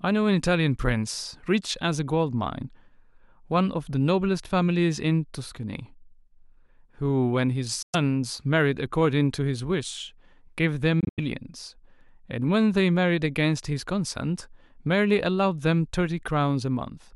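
Speech, with two short holes where the sound stops abruptly and picks up further along, as though it had kept playing. The first is 7.82 to 7.95 s. The second, 11.00 to 11.20 s, is broken into more than one gap, the longest 85 ms. This is likely Bluetooth dropout from packets arriving too late.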